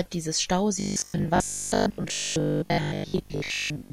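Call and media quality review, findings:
Robotic sound from repeated short buffers, 0.8 s to end: rigid metallic 50 Hz buzz over the speech. Likely starved playout looping about 20 ms chunks, most of the audio skipped.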